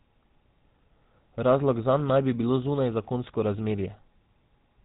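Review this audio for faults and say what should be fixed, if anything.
The whole clip carries GSM full-rate codec damage, and it is plainly audible. The speech has a buzzy, gravelly texture because the codec rebuilds the voice from a vocal-tract model driven by a coarse, regularly spaced pulse excitation, at a rate that fits 13 kbps. Nothing survives above 3.8 kHz. Simple telephone band-limiting would sound dull but smooth; here the roughness sits inside the passband itself. To prevent this, capture or route the speech over a wideband path rather than a GSM full-rate link.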